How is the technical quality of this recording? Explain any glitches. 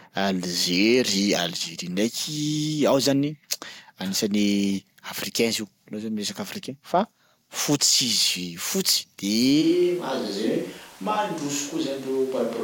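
The recording has one clear fault. At 9.63 s the speech switches to a distant microphone, most likely because the close microphone dropped out and a farther one took over. It stays that way to the end. The sound turns suddenly hollow and roomy, about 5 dB quieter, with room noise only around 25 dB below the speech. On a waveform the envelope steps down and the gaps fill with noise. A spectrogram shows thinner low frequencies and reverberant smearing.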